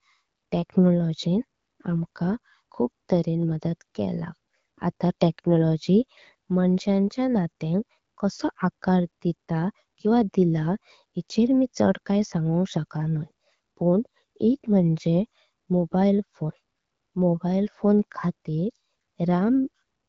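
No technical faults are audible.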